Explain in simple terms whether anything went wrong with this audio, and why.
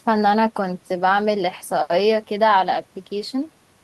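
Nothing went wrong here: I hear no dropouts, clicks, distortion or glitches anywhere in the speech recording.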